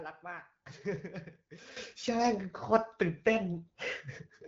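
At 1.77 s a sudden gain jump lifts speech and background noise by about 12 dB, likely an unramped gain change; the waveform abruptly steps up.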